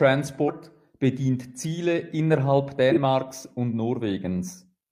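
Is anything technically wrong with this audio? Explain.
Yes. The speech skips forward three times because compressed frames were skipped: at 0.45 to 0.51 s, where roughly a tenth of a second of audio is lost, and at 2.88 to 2.98 s and 4.42 to 4.51 s, where a few tens of milliseconds vanish each time. Whole frames never reach the output, so playback leaps ahead by a frame multiple. In a lossy codec overlapping neighbours blend the join into a short smeared blip, while lossless frames meet with a hard click. A spectrogram shows an abrupt discontinuity in the harmonic tracks at each jump.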